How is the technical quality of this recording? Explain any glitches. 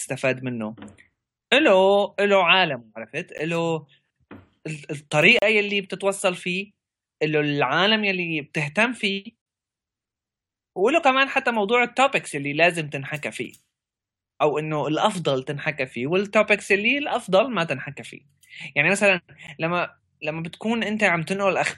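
The recording has four short dropouts, each a gap between stream segments: at 3.38 s, 5.39 to 5.42 s, 9.42 to 9.46 s and 19.47 s. With 2-second segments, mismatched timestamps leave holes of 11 to 46 ms that the player fills with hard-edged silence. No sound is lost.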